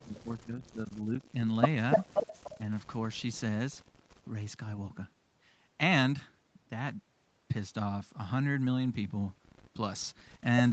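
From the start to 1.42 s, the speech sinks deeply, by about 25 dB at its lowest, and comes back unevenly. This is speech suppressed in double talk. The likely cause is a far-end talker speaking at the same time. The echo canceller could not tell the near voice from the loudspeaker echo, so it turned everything down together. A small dip of about 5 dB follows between 2.58 and 2.68 s.

From 1.92 to 2.60 s, a second copy of the speech trails the first by 295 ms. It sits about 15 dB below the main voice. This is echo leak. It likely comes from a loudspeaker phone whose canceller did not fully remove what its microphone picked up, so the leftover was sent back. A far fainter scrap, about 40 dB down, returns at 3.17–3.22 s. Through all of this, the call codec's band limit at 8 kHz keeps the top end dull.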